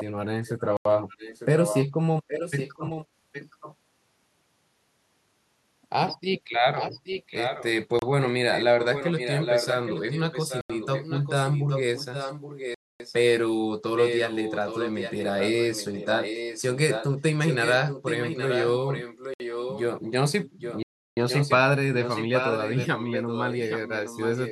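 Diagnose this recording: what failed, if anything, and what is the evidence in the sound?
Call processing: the far end's echo canceller likely failed to remove its loudspeaker pickup. A copy of the speech returns 820 ms late, about 5 to 10 dB below the direct speech, across 0.0–3.76, 6.75–7.66, 8.52–13.16, 13.96–19.82 and 20.51–24.51 s.

Driver or buffer: output blocks went unfilled, inserting blocks of digital silence at 0.77 s (85 ms), 7.99 s (29 ms), 10.61 s (85 ms), 12.74 s (256 ms), 19.34 s (63 ms) and 20.83 s (341 ms). The audio cuts out and back with no fade. The 85 ms gaps fit a 4096-sample buffer.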